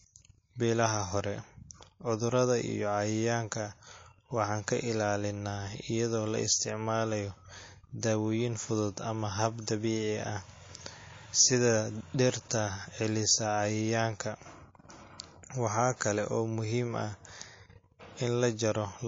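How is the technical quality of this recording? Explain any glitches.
The technical quality is poor: the recording carries audible compression damage from start to finish, plus one pre-echo glitch.

MP3 compression, throughout: the speech sounds watery and swirly, with dull treble and metallic chirping on s sounds. The likely cause is MP3 encoding at a very low bitrate, on the order of 32 kbps. With so few bits, the encoder cuts the high frequencies at a fixed point and drops quieter frequency lines, which flicker on and off between frames and produce that unstable, smeared texture.

Pre-echo, from 15.97 to 16.01 s, just before "kale oo": a short hiss lasting about 41 ms rises roughly 11 dB ahead of the sharp onset, and the attack itself sounds softened. The encoder spread its quantisation noise across a block about 72 ms long. The noise level was set by the loud attack near the end of that block, so it spilled into the quiet moment before it. 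The smearing suggests the encoder stayed with long blocks here and never switched to short ones.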